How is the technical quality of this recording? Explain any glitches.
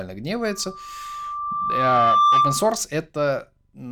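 The recording is compromised by a loudspeaker feedback squeal. From 0.46 s to 2.84 s a single 1.2 kHz tone swells over roughly two seconds until it sits around 10 dB above the speech. The microphone is picking up its own loudspeaker, and at 1.2 kHz the loop gain exceeds unity, so that frequency reinforces itself on each pass until the loop is broken.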